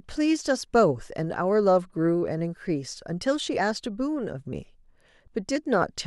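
At 3.58 s and again at 5.56 s, the speech skips briefly, caused by overlap between stream segments. The 2 s segments' time stamps overlap, so the player trims a few milliseconds of real audio, and the waveform jumps discontinuously at each boundary.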